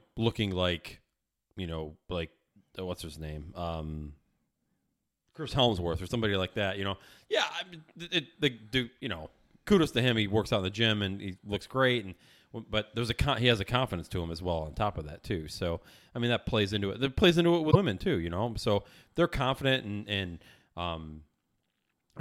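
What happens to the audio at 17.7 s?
Right after "plays into it", the speech jumps ahead, and from 17.70 to 17.76 s there is a brief disturbance of about 58 ms before decoding settles. This is a broken MP3 bit reservoir. The span matches about two frames of 26.1 ms each. The likely cause is that frames were dropped from the stream. The next frame then reached back for its borrowed data and decoded bytes belonging to a different frame.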